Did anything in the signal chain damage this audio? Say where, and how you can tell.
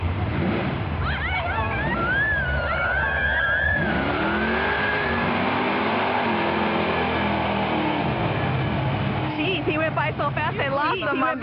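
Yes, there's a doubled audio track running through the whole clip. Everything you hear comes back again around a second and a half later, about 5 dB quieter, at full bandwidth with no reverb tail or room colour, so it's a copy of the signal rather than a space. That points to the mix or capture stage, most likely the same feed being picked up a second time through a slower path, or two copies left out of step in an edit.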